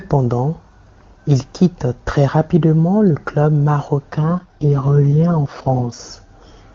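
At 4.12 s an AMR rate drop sets in and lasts until 6.00 s. The radio link weakens, so the network switches the codec to a low mode and spends the freed bits on error protection. The roughness points to a fall from the clear 23.85 kbit/s HD Voice mode to around 6.6 kbit/s. The speech keeps its full wideband and never breaks off, but it turns raspy and synthetic until the higher rate returns.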